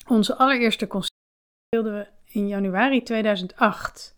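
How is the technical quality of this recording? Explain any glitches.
The recording has one clear glitch, an audio dropout to silence from 1.08 s to 1.73 s. For about 0.65 s the sound stops abruptly mid-flow, then resumes just as suddenly, and whatever occurred in that gap is lost. The cause is likely an input that briefly failed or was muted while the recorder kept writing zeros. Unlike a natural pause or a noise gate closing, the gap holds no room tone or hiss at all, only dead silence.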